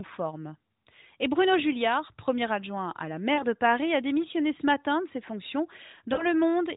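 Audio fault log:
3.34–3.45 s and 6.14–6.27 s: lost AMR speech frames. Each time the decoder reuses the last good frame at fading gain, so the narrowband speech briefly dips and smears.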